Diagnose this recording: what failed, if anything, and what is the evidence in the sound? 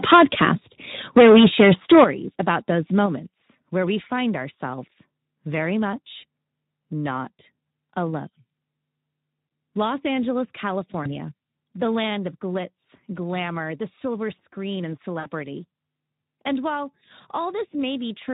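At the converter, the sound shows microphone overload twice. From 0.03 to 0.49 s the peaks land about 10 dB past full scale, with roughly a tenth of samples flattened. From 1.16 to 2.04 s they are about 11 dB over, with around a fifth flattened. The loudest syllables take on a harsh, crackling edge, and the crackle follows the signal peaks rather than packet timing. That points to clipping at the input, likely from an over-set microphone gain, rather than codec or network damage.

In the call processing stage the microphone volume is stepped down three times. There is a drop of about 3 dB at 0.13 s, a large drop of about 11 dB at 2.04 s, right as the second clipped stretch ends, and about 4 dB at 3.06 s. Voice and background fall together in one instant step, with no gradual release. That separates it from a compressor or noise gate and fits an automatic gain control likely cutting the device's input level after detecting overload.

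Throughout the clip the Speex codec leaves plainly audible damage at 11 kbps. The speech sounds hoarse and grainy, with a noisy texture. CELP at this rate has too few bits to code the excitation faithfully, and whatever sits above 4 kHz is a shaped noise fill rather than real detail. The artefact is constant and tied to the codec, unlike the brief, time-local events elsewhere.

On the network side there is VoIP packet loss concealed by the speech codec. At 11.03 to 11.09 s one 20 ms gap is bridged. At 15.19 to 15.27 s a longer hole, which fits three lost 20 ms frames, is stretched into a sound that fades. The weakened sound carries on briefly after real packets resume. That lingering recovery, rather than an abrupt silence or click, distinguishes decoder extrapolation from a plain dropout.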